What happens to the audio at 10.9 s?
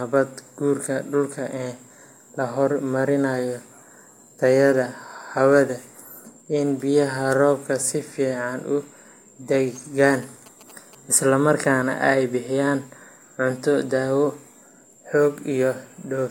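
At 10.9 s the speech is overlaid by GSM signalling bursts, running from 9.76 to 10.95 s. A nearby 2G phone's short radio bursts are rectified by the audio circuitry into a galloping dit-dit-dit of short 217 Hz buzzes, roughly 25 dB below the speech. A spectrogram shows grouped vertical stripes with a harmonic comb spaced 217 Hz apart, and the waveform shows clusters of evenly spaced spikes.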